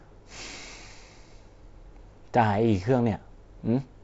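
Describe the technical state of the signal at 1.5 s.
At 1.5 s the speech is intact, with no fault, just the band-limited sound of G.722 wideband telephone coding at 48 kbit/s, which leaves nothing above about 7.7 kHz.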